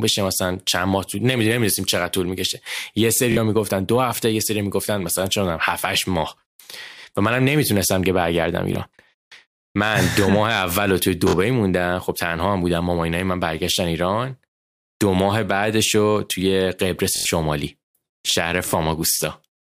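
Speech with a repeated buffer stutter at 3.32, 8.73, 11.29 and 17.16 s. The same roughly 23 ms chunk replays, which fits a 1024-sample buffer, four times over at 17.16.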